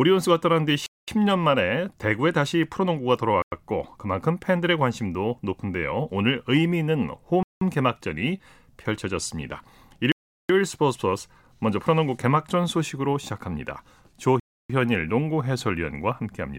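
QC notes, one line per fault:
0.86, 3.42, 7.43, 10.12 and 14.40 s: Bluetooth stall. The speech cuts to silence for 0.22, 0.10, 0.18, 0.38 and 0.30 s respectively, then resumes. This is likely interference delaying packets, so the headphone buffer ran dry until the retransmitted data arrived.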